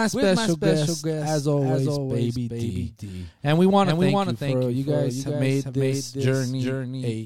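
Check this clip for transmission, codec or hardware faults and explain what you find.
One fault runs through the whole clip: a doubled audio track.

Throughout the speech, a second copy of the same signal is mixed in, likely because the audio was captured again through a slower path and both feeds were summed. That copy trails the original by roughly 400 ms and sits about 5 dB lower. It is full-band, with no decay or room colouring, so it sounds less like reverberation and more like a distinct echo repeating every syllable a beat late.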